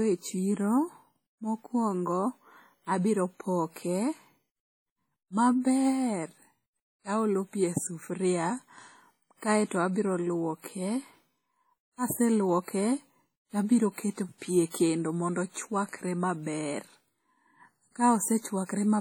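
Right through the speech there's a ringing, washy quality with a hiss that swells and fades along with the talking, likely from WMA compression at a low bitrate, something like 32 kbps. Quantisation noise smears across long transform blocks and faint detail gets dropped.

Just after "tabiro keto pi e", from 14.70 to 14.74 s, there's a pre-echo: a short hiss of about 39 ms leads into a sharp onset. The noise sized for the loud attack spills into the quiet gap before it, so the onset sounds blurred.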